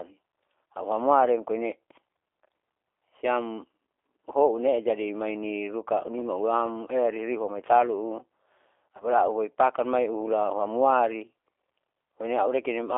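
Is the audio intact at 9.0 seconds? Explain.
No. VoIP packet loss concealed by the speech codec hits from 8.97 to 9.04 s, a gap of about 30 ms that fits a single lost packet. With no new data, the decoder keeps generating speech from the last pitch and vocal tract settings it received while turning the level down, so the missing stretch becomes a brief stretched, fading buzz or coloured noise. Because each frame depends on the one before, the speech stays weak or distorted for tens of milliseconds or more after about 9.04 s.

That moment also carries the G.729 codec damage present across the whole clip. The sound fits G.729A at 8 kbit/s, which rebuilds speech from a compact filter, pitch and pulse model rather than the original waveform. The band is limited to roughly 300 Hz to 3.6 kHz, giving a thin telephone tone, and the coding roughness is plainly audible as a slightly rough, synthetic quality.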